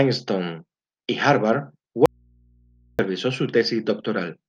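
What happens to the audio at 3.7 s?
Nothing goes wrong at 3.7 s; the speech carries on intact through that moment with no dropout, click, distortion or other fault.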